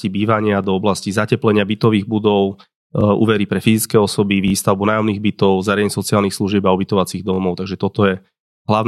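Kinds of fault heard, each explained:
Repeated buffer: at 0.64, 3.01, 4.48 and 7.34 s the speech stutters briefly because new audio arrived late and the last 21 ms block, which fits a 1024-sample buffer, played again with hard joins, once at the first two and twice at the last two.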